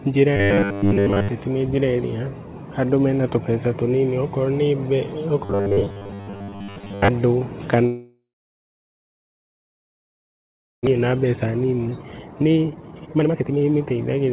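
From 0.37 to 1.29 s, and again from 5.45 to 7.08 s, the speech takes on robotic sound from repeated short buffers, most likely because audio arrived too seldom and the receiver kept repeating a 10 ms slice in place of what was skipped. That imposes a fixed 100 Hz buzz, heard as a stiff metallic drone that only roughly follows the speech. On a spectrogram it appears as evenly spaced horizontal harmonics at 100 Hz intervals.

A long network dropout runs from 7.86 to 10.89 s, probably from a stall in packet delivery. About 1.6 s of speech is lost. The last sound carries on and fades, then about 2.6 s of near silence follows, visible as a flat waveform and an empty spectrogram band before the speech resumes.

From 10.99 to 14.32 s comes a jitter buffer speed-up. After the dropout the buffer had built up far too much delay, roughly 1.5 s, and the receiver trimmed about a second of pitch-period pieces. 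The speech runs at 135% speed, sounding hurried but unchanged in pitch. On a spectrogram the syllables look compressed in time while harmonic spacing stays the same.

Throughout the clip, nothing appears above 4 kHz, which fits a narrowband telephone codec such as G.711.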